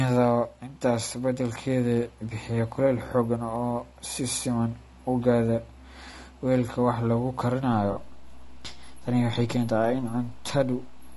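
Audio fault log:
throughout: The speech sounds rough and grainy, with noise between the harmonics and a thin, synthetic top band. This is likely low-delay AAC compression, at a rate that fits about 32 kbps. Its short frames resolve pitch harmonics poorly and leave too few bits for a clean spectrum.
6.11–6.14 s and 7.91–7.96 s: AAC frame loss with concealment. About 20 ms and then 40 ms of audio go missing. The decoder fills each gap from the last good spectrum, so both gaps sound like brief smeared, noisy patches rather than clean dropouts.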